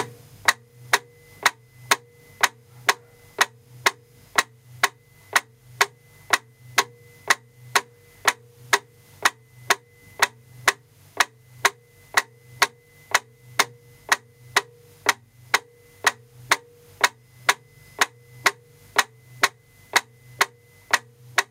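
Gain pumping runs through the whole clip. The level keeps ducking whenever something loud comes through, then creeps back up in the quieter stretches, with the gain swinging by something like 15 dB. That makes everything feel squashed and breathing rather than steady. The likely cause is a gain set far too high for the microphone, with a fast limiter or compressor clamping down on each loud sound and letting go afterwards.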